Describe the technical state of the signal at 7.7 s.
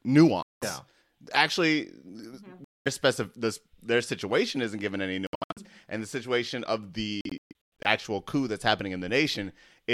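At 7.7 s the sound sits inside a burst of gaps from 7.21 to 7.86 s, between "and the situation of" and "coup that's happening". Short silences with abrupt or briefly faded edges cut in and out, the longest about 128 ms. Playback resumes further on, as if it had kept running. The likely cause is a Bluetooth dropout, with packets arriving too late and being discarded.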